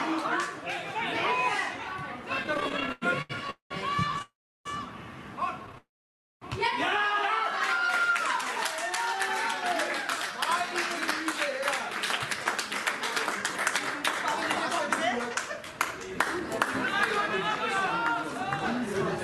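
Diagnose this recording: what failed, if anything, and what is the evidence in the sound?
Repeated stalls (stutter) at the network and jitter buffer, 2.43 to 4.22 s and 5.66 to 5.78 s. Late packets left it empty repeatedly. Twenty-four gaps, longest 96 ms, were filled by continued sound.

Call audio freeze from 3.50 to 3.72 s, 4.22 to 4.67 s and 5.78 to 6.43 s. Sound hangs, fades to silence, then resumes, likely from held-up packets.

Jitter buffer slow-down from 8.02 to 10.71 s. Repeated pitch periods added 186 ms, so sound runs at 93% speed with unchanged pitch.

Jitter buffer speed-up from 12.18 to 19.19 s. Trimmed pitch periods remove about half a second, so sound runs at 107% speed and feels hurried.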